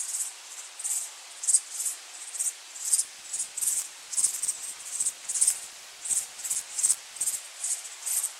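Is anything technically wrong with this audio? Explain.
Yes, there's buffer tearing from 3.04 to 7.39 s. It's a robotic rattle at about 94 Hz, which fits a 512-sample buffer. The writing side and the playback side of the ring buffer have drifted so they cross inside every period. A small slice of each buffer plays audio from roughly 20 ms earlier, with hard joins on both edges, and that repeats every buffer. The buzz only rides on the sound itself.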